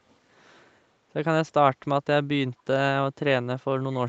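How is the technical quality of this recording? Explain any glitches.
The recording carries one audible glitch, a brief echo leak near the very end; the audio is band-limited to 8 kHz, as expected from the Opus call path and microphone processing.

From 3.91 to 3.97 s, a faint, short scrap of delayed speech surfaces, lagging the original by about 238 ms and sitting roughly 30 dB below it. The likely cause is a loudspeaker on the far end whose echo canceller let a residue of its microphone pickup through and send it back, producing this ghost copy.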